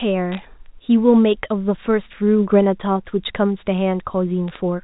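Two short bursts of bit errors on a digital phone line, 0.32–0.39 s and 4.48–4.57 s, put sharp ticks over the speech. Flipped bits corrupt single G.711 samples, and roughly 0.3% and 0.15% error rates across a few frames produce brief crackle.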